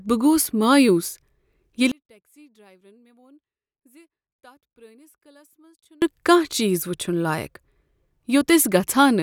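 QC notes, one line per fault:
1.92–6.02 s, one channel inverted: when the stereo speech is folded to mono, level drops by about 35 dB across this span and the centred voice and low end almost disappear, leaving only a faint residue before full level returns at 6.02 s. The likely cause is reversed polarity on one channel, so the content common to left and right cancels in the sum and only the small inter-channel difference survives.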